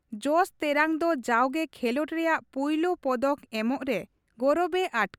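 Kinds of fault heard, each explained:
Nothing here stands out as a fault; the speech comes across steady and intact with no dropouts, glitches or odd artefacts catching the ear.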